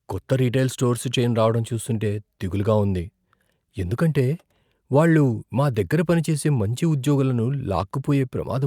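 No technical faults are audible anywhere in the speech.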